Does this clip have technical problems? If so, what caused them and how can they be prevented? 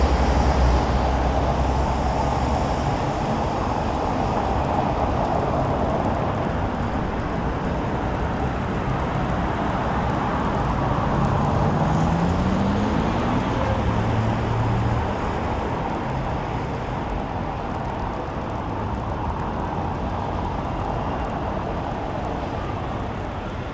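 Yes. From 1.4 s to the end, a resampler restarted on every block, converting 48 kHz to 16 kHz in 50 ms chunks without carrying filter history across edges. Each edge gets a small error, heard as a steady 20 Hz tick present only where there is sound. Buffer-underrun clicks, by contrast, land irregularly and leave gaps. To prevent it, run one continuous resampler that keeps its filter state between blocks.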